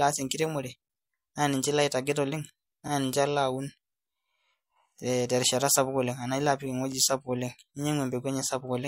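A brief stutter lands at 6.92 to 6.94 s, just after "ilo apik", where about 23 ms of speech plays twice. This is an overlapping-chunks fault: the audio was handled in 2.0 s blocks, and this block began before the previous one ended, repeating the overlap at the join.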